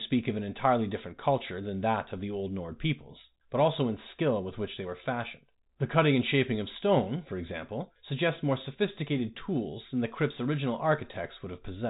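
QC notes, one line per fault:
No faults turn up here; the speech simply comes over the usual G.711 A-law telephone path at 64 kbps, with nothing above 3.8 kHz, just as a phone line would carry it.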